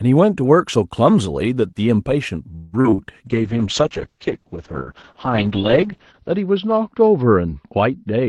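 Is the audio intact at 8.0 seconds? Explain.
No. A call bitrate drop starts at 3.27 s and lasts to the end. The encoder cut its bit budget sharply, which fits a fall from 32 to about 7 kbps, so at 8.0 s the speech sounds coarse and rough, with everything above 6 kHz missing.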